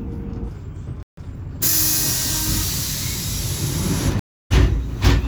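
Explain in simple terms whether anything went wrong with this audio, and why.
Three things go wrong in this audio.

At 1.03 seconds the sound suddenly cuts out. It stays silent for about 0.15 seconds, until 1.17 seconds, then carries on. This is a playback stall. The player most likely ran short of data, or was briefly held up, so it had nothing to play. The sound simply stops mid-flow and then picks up again.

Right after that, from 1.17 to 1.75 seconds, the sound plays too fast. This is time-compressed catch-up. The player had fallen behind during the stall. To catch up, it snipped out tiny pieces and blended the joins. The sound runs at 1.25 times normal speed, but the pitch stays the same. You hear a rushed stretch.

At 4.19 seconds the sound drops out again, for about 0.28 seconds, until 4.52 seconds. This is a stream reconnect. The connection broke, and the player went quiet while it reconnected. 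Then it restarted decoding partway through the stream. When the sound returns, it picks up a tiny bit later than where it stopped. The very start eases in softly rather than cutting straight back.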